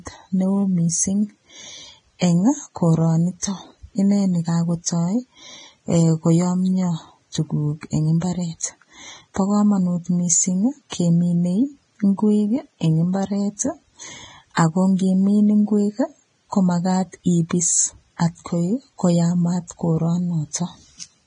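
From start to finish the speech carries heavy codec damage, likely Vorbis compression at a low setting, with the coarseness pointing to a bitrate around 22 kbps. Nothing survives above 9.7 kHz, and the treble below that cut-off is quantised so roughly that sibilants turn into grainy hiss and consonant attacks smear. On a spectrogram the energy stops at a flat ceiling near 9.7 kHz, with speckled, noisy blocks replacing fine high-frequency detail.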